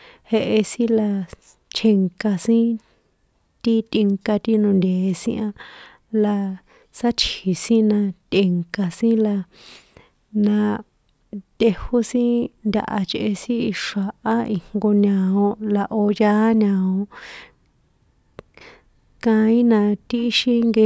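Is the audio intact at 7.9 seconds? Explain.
Yes, the audio is intact at 7.9 seconds, with no dropout, glitch or other fault at that moment.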